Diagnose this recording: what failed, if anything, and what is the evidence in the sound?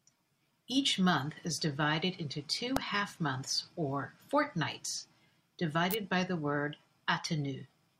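Two electrical switching spikes ride over the speech: a sharp snap at 2.77 s and a tight click cluster from 5.91 to 5.94 s, each peaking near -10 dBFS. The waveform shows needle-thin spikes; the spectrogram shows full-band vertical lines. This is likely a nearby switch arcing into the analogue wiring.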